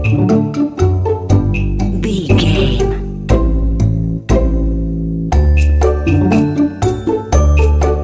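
No faults can be heard anywhere in this recording.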